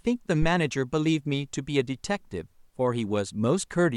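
Phantom power thump, 0.42 to 0.49 s: a supply switching on or off on the live input sends a step through coupling capacitors, giving a deep thump peaking about -16 dBFS.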